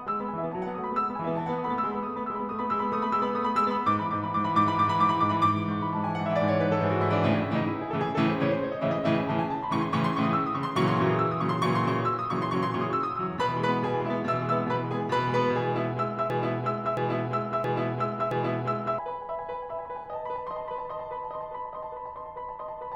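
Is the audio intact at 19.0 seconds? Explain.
No. 19.0 seconds falls at the tail of a broken-record loop running from 16.3 to 18.99 s: a 0.67 s fragment of the music repeats four times back to back, likely because playback stalled and kept resending its last buffer. The music that belonged there is lost.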